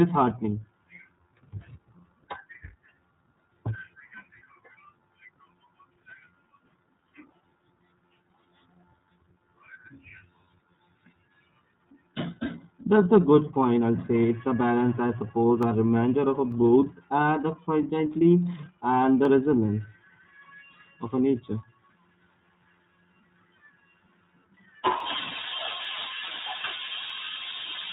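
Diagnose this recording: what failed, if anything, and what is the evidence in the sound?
Throughout, the speech sounds slightly rough and synthetic, with nothing above 4 kHz. This points to the codec stage: iLBC at 13.33 kbps, coding each 30 ms frame independently.

Sharp single clicks occur at 15.63, 16.52, 19.25, 25.00, 25.85 and 27.10 s, each a thin vertical line. These are likely dropped samples in the driver or buffer stage, each a fraction of a millisecond.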